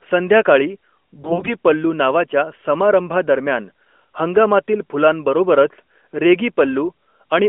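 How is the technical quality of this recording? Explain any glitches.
The speech comes through a narrowband mobile codec, consistent with AMR-NB at its 12.2 kbps mode, confined to roughly 250 Hz to 3.4 kHz with light codec colouring. One glitch stands out.

From 1.22 to 1.54 s there are AMR bit errors. Around one bit in ten of the weakly protected parts of the frames arrived corrupted, so pulse positions and fine gain and spectral values are wrong. The voice turns hoarse and gargly. Unlike frame loss, it never drops out or repeats, and pitch and loudness roughly hold.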